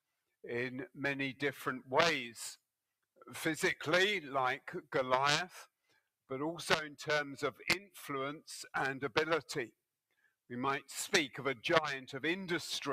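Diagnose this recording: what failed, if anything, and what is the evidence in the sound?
The call processing stage is at fault: the noise suppressor cut sound it took for noise, pulling it down by about 20 dB from 5.82 to 6.09 s and about 17 dB from 10.11 to 10.5 s. The steady parts sink there while onsets still get through.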